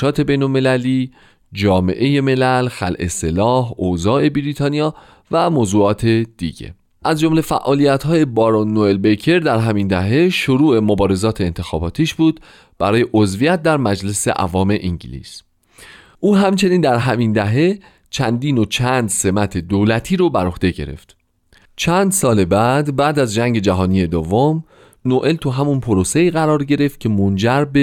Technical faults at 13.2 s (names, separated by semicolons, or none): none